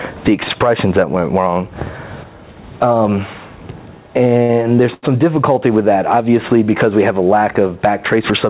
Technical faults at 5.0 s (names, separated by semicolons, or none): gain pumping; short stall from a late packet